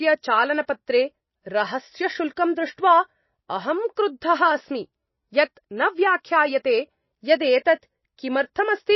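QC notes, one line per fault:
Throughout, MP3 compression: plainly audible watery, swirling sound with nothing above 5.8 kHz, likely from an MP3 encoder short of bits, fitting roughly 24 kbps, dropping weak lines frame to frame. A spectrogram shows a flat ceiling at 5.8 kHz and patchy, flickering energy below.
2.36 s, pre-echo: a short hiss runs about 10 ms ahead of a sharp attack, which sounds softened, because the codec spread that block's quantisation noise across the quiet moment before it. A waveform shows low-level noise just before the transient; a spectrogram shows a short smear preceding it.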